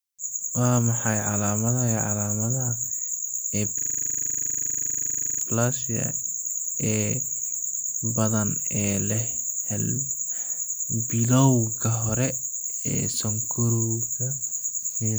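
Between 3.79 and 5.42 s the system hangs, replaying one 40 ms buffer: a system hang loop, heard as a steady 25 Hz buzz.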